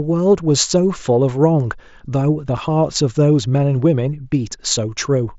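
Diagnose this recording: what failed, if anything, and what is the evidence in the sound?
The Bluetooth link between headset and phone failed briefly. Unconcealed Bluetooth headset packet loss at 2.57 s leaves a hole of about 7.5 ms, consistent with one lost packet, filled with silence or an idle pattern rather than patched. The waveform shows a gap with abrupt edges, and a spectrogram shows a thin vertical blank across the mSBC wideband speech.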